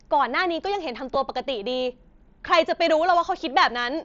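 At 1.14 s there is a concealed Bluetooth headset packet loss. A single gap of about 7.5 ms, which fits one lost mSBC frame, was filled by repeating the closest-matching stretch of the preceding waveform. Because only one packet is missing, the patch is almost inaudible. On a waveform the cycle just before the gap repeats. A spectrogram shows a very brief smear or slight discontinuity in the harmonics, within the mSBC band that stops at 8 kHz.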